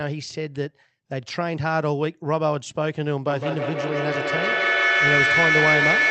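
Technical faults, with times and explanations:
3.27–6.10 s, feedback howl: a tone near 2 kHz builds out of the speech, with a loop delay of roughly 150 ms, and peaks about 4 dB above it. Unlike echo, each repeat grows, because every trip round the loudspeaker–microphone loop adds level.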